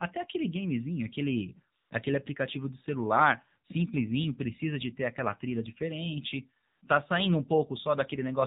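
From start to finish the speech passes through the AMR narrowband mobile codec, with plainly audible damage: a buzzy, synthetic quality that points to a low AMR-NB mode near 7.4 kbps. The 8 kHz sampling leaves nothing above 4 kHz, so a spectrogram shows a hard, flat ceiling at 4 kHz.

From 1.80 to 1.90 s, and again from 6.70 to 6.82 s, AMR comfort noise replaces the real signal for about 100 ms and 120 ms. The encoder treated these moments as silence and stopped sending speech frames, so the decoder generated synthetic noise from a coarse level and spectral description. It sounds like a brief, smooth, steady hiss that switches in and out. A spectrogram shows evenly textured blocks with sharp edges, and the waveform shows a uniform low-level band.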